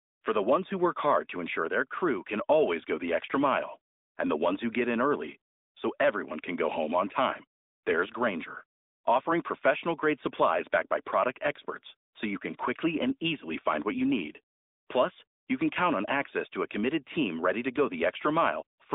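No technical faults are audible.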